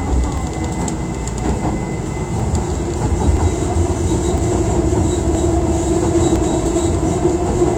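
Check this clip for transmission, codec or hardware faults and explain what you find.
There is one transmission fault: overlap between stream segments, recurring about once per second at 0.38–0.42, 1.39–1.42, 2.40–2.44, 3.37–3.40, 4.38–4.42, 5.35–5.38 and 6.36–6.39 s. Overlapping timestamps on roughly 1-second segments make the player discard 28–43 ms of genuine sound, producing regular clicks or tiny skips. The waveform shows an abrupt jump, and the spectrogram shows thin vertical broadband lines.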